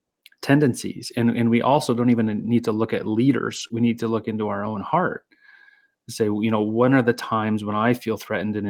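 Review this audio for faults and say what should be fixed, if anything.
There are four spots where a lost packet was rebuilt from error correction: 2.31 s, 3.55–3.65 s right after "need to look at", 4.65 s after "to look into our", and 7.69–7.91 s after "when are the times". The decoder played the low-bitrate backup copies carried in the following packets, so there are no gaps, but those 20, 60, 20 and 120 ms stretches come out rougher and noisier.

There's also one short concealed packet loss at 3.67–3.71 s, just after the rebuilt run. About 20 ms never arrived in time, and the receiver extended the preceding sound to bridge it before blending back in. That leaves a brief smear or wobble.

Both come from packets dropping on the network, so the fix is to shore up the connection and give the jitter buffer a bit more headroom.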